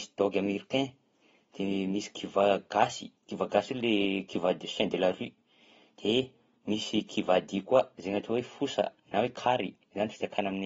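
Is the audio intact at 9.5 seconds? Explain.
No, at 9.5 seconds you're still hearing the AAC compression that runs through the whole clip. It's likely a starved AAC-LC encode, which fits a bitrate around 27 kbps, cutting everything above 7.7 kHz, so the speech comes across dull, smeared and warbly.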